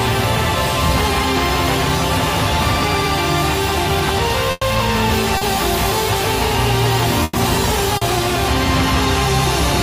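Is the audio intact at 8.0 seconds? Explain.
No. From 7.97 to 8.03 s there is a short concealed packet loss. About 40 ms of audio never arrived, and the decoder filled the gap by extending the preceding sound before fading back, causing a brief smear. On a spectrogram it shows as a blurred patch.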